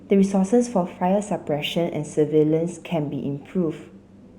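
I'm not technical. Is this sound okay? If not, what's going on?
No. The whole clip has imaging from linear upsampling: a crude rate conversion dulls the highs and adds a faint metallic shimmer on hissy sounds.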